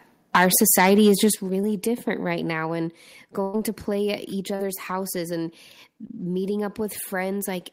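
From 0.35 to 1.26 s the loudest peaks are flattened, with a few percent of samples clipped and the level running about 7 dB beyond the converter's range. This is a microphone overload, likely from the input volume being set too high. The squared-off peaks give the speech a harsh, crackling edge.

Inside that stretch, at 0.36 s, the level falls about 3 dB in one step, and just after it ends, at 1.35 s, it drops again by about 8 dB. Both voice and background drop together at those instants. This is the microphone volume stepped down, likely the call software automatically reducing input gain after detecting the overload.

At 3.43 to 3.55 s, just after "now and", there is a burst of packet loss. Roughly 100 ms of audio never arrived. The receiver extended the last sound as a decaying hold for about 104 ms, then resumed at "to play at", with that stretch of speech gone.

Short concealed packet loss occurs twice. 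From 4.55 to 4.61 s, just before "houses and", about 40 ms is missing and patched with about 36 ms of continued sound. From 6.07 to 6.11 s, just after "houses and", about 20 ms is missing and covered by about 22 ms of fill. Both sound like a brief smear or wobble where the decoder bridged the gap.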